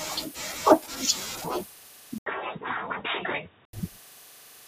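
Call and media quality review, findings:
Input likely switched to a poorer device, 2.18–3.73 s: 80 ms gap, then speech dull and boxy, nothing above 3.8 kHz, about 5 dB quieter, new background noise about 30 dB below speech.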